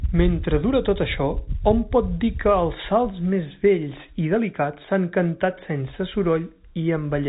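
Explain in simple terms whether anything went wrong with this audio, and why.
Nothing stood out on listening: the speech has the narrow, slightly boxy sound of an ordinary phone line, with nothing above about 3.8 kHz, and that is simply how telephone audio normally sounds.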